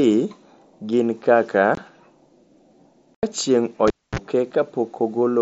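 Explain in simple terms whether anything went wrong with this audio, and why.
Two things go wrong here. First, there's unconcealed Bluetooth headset packet loss: right after "gin kaka" at 1.75 s the speech drops out for a split second, and again from 3.15 to 3.23 s for a longer gap of about 80 ms. Chunks of audio never made it from headset to phone, nothing patched the holes, so you get abrupt gaps.

Then at 3.88 s the cable was pulled and plugged in. There's a pop, roughly a quarter-second of near silence, then a brief burst of 60 Hz mains buzz, about 40 ms, as the plug half-touches, and another pop when the sound comes back at 4.19 s, all over the otherwise wideband mSBC headset sound.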